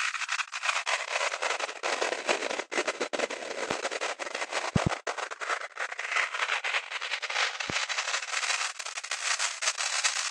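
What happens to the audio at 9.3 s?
Nothing goes wrong at 9.3 s: the sound carries on intact through that moment, with no dropout, click or other fault.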